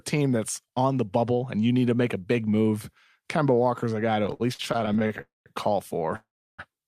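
Repeated stalls (stutter) break up this speech clip from 4.23 to 5.21 s: fifteen brief holds of up to 57 ms fill about a quarter of that span, as late packets keep emptying the jitter buffer, so the speech drags while losing nothing. Call audio freezes follow at 5.21 to 5.48 s and 6.16 to 6.60 s. Each is a fading hold that drops to silence for 170 ms and then 330 ms before resuming where it stopped, likely because packets were held up in transit.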